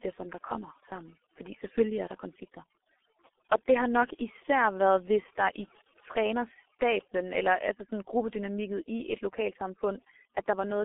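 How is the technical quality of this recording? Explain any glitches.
Technical quality is poor: the speech carries two faults that run for the whole recording.

Overdone noise removal, throughout: a noise suppressor set too aggressively cuts individual frequency bands whenever they approach its noise estimate. The background drops and breaks up into twinkling specks. A spectrogram shows scattered isolated dots and patchy, eaten-away speech harmonics.

G.723.1 codec, throughout: this heavily damaging low-rate telephony codec, whose sound fits roughly 6 kbit/s, models the voice in slow-updating 30 ms frames. Speech is muffled and hoarse with smeared consonants. The spectrogram shows energy confined to about 250 Hz–3.5 kHz and nothing above 3.8 kHz.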